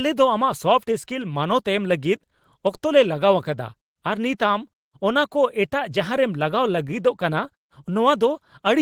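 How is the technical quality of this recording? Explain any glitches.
The technical quality of this speech recording is sound, with no glitches to explain.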